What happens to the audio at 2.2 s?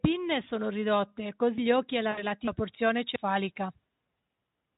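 Right after "gli occhi e la", from about 2.12 to 2.25 s, VoIP packet loss concealed by the speech codec takes over. Roughly 60 ms of audio went missing (consistent with three 20 ms frames), and the Speex decoder filled the gap by repeating its last pitch and filter with falling gain. The speech smears into a buzzy tone or coloured noise that fades and stays weak briefly after packets resume. A spectrogram shows flat, repeated harmonics thinning out, and the waveform shows near-identical pitch cycles shrinking in amplitude.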